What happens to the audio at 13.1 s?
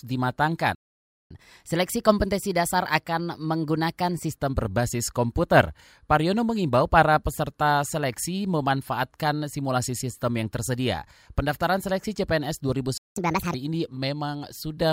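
At 13.1 s the speech is inside a playback stall. From 12.98 s to 13.16 s the output drops to silence for about 0.19 s, cutting the speech off mid-flow before it resumes where it left off. The gap is most likely the player running short of buffered data or having its audio thread blocked, so nothing reaches the output until it recovers and delivers samples again.

Right after the gap, from 13.16 s to 13.54 s, comes a catch-up at higher speed. To recover the time lost in the stall, the player resamples its backlog and runs it at 1.5 times normal rate. Because resampling shifts speed and pitch together, the speech sounds hurried and raised by roughly seven semitones, a chipmunk-like lift, for just under 0.4 s. It then snaps back to normal speed and pitch once the backlog is cleared.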